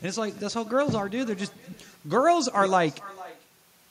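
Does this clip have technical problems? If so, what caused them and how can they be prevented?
Yes. Echo with no canceller runs through the whole clip. The speech returns around 400 ms later, about 21 dB quieter and thin. A loudspeaker at the far end feeds its microphone, and nothing removes that copy. Acoustic echo cancellation or headphones at the far end would prevent it.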